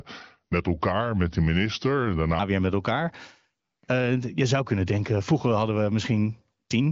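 Until 2.39 s, a section at the wrong speed plays at 0.84x, likely from a clock mismatch. The sound drags about three semitones low, with the spectrogram's harmonics shifted downward.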